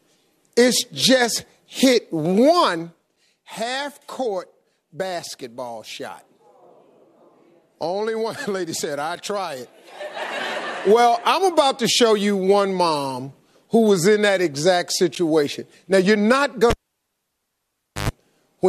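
At 15.15 s there is a gap between stream segments: two consecutive chunks of the stream do not line up in time, so the player inserts about 11.5 ms of silence. It sounds like a tiny click-edged dropout, and on the waveform it appears as a hard-edged flat line, with a thin vertical blank stripe in the spectrogram.

From 16.70 s to 18.10 s the cable is pulled and plugged in. A pop marks the disconnect, followed by roughly 1.34 s of near silence. While the plug tip alone makes contact, about 107 ms of 50 Hz mains buzz comes through, and a second pop marks the return of the sound. The spectrogram shows a broadband spike, an empty stretch, bright horizontal lines at 50 Hz and its harmonics, then another spike. The waveform has a matching flat section between two sharp transients.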